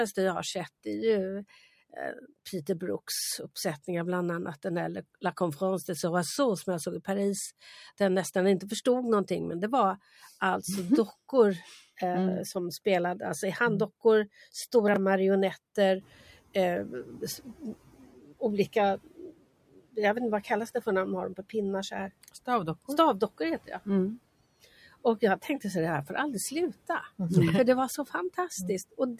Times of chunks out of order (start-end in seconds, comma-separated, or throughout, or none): 14.88-14.96